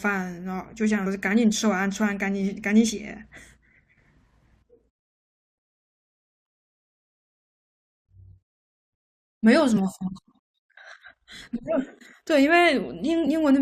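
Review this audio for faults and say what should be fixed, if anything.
Compressed frames skipped in the speech at 1.05, 2.89, 9.76, 11.4 and 13.26 s. Each jump drops roughly 40 to 100 ms, consistent with 21.3 ms frames, so the audio jumps ahead at each join. Prevent it by checking file integrity and retransmitting or re-encoding damaged frames.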